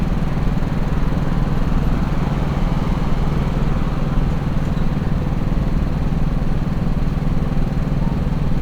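No technical faults are audible.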